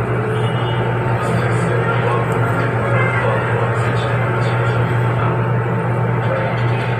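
At 1.07 s, 2.81 s and 5.18 s, compressed frames are skipped. Runs of frames go missing, and the audio leaps ahead by about 300 ms each time, consistent with frames near 23 ms long.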